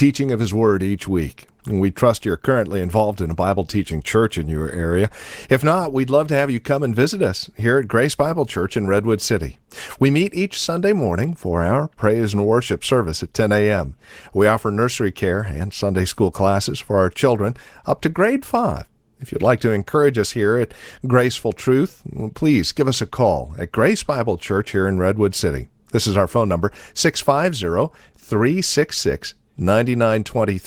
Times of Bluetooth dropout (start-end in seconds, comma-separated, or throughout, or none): none